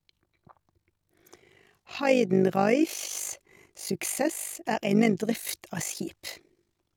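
The clip is speech, and it carries overlap-add ripple from start to finish. The level pulses rapidly, about 50 times a second, with a swing of about 11 dB. That gives the sound a harsh, buzzy tremolo. The cause is frame-based processing. The audio was split into windowed frames and rejoined with an overlap whose windows do not add up to a steady gain. So the level dips and recovers once per frame.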